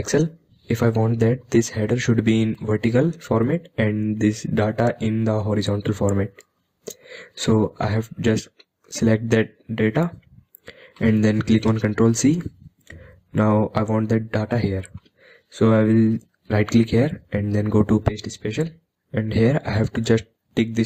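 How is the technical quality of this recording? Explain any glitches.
The recording has one recurring glitch. Audio missing between chunks at 2.55, 8.54, 14.52 and 20.51 s: brief skips every 6 s, each losing around 10 ms, likely where chunked recording drops material while switching chunks.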